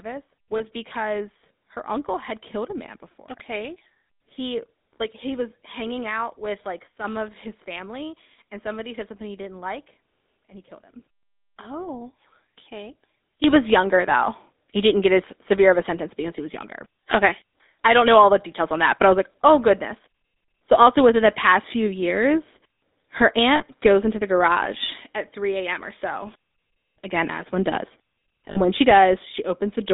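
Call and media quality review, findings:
GSM full-rate codec, whole clip. Buzzy, gravelly roughness on speech, band limited to about 250 Hz to 3.7 kHz. Vocal-tract model driven by sparse regular pulses, consistent with 13 kbps full-rate coding; codec damage plainly audible.

Lost GSM frames, 0.58 s (just before "because her uncle had"), 23.56 to 23.64 s, 28.50 to 28.58 s. Brief rough, metallic hold. Decoder repeating the last good frame's parameters, fitting one, two and three missing 20 ms frames respectively.

Sudden gain jump, 6.88 to 7.04 s, between "hanging out with like" and "of his family and": speech and background drop together by about 6 dB. Again at 13.44 s to end: both rise by about 12 dB. Likely an unramped digital gain step.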